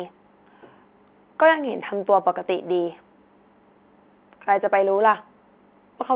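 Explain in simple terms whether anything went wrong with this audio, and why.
Nothing went wrong that a listener would notice: the speech comes across as an ordinary phone call, with the slightly narrow, muffled quality that normal telephone sound always has, and nothing stood out as a problem.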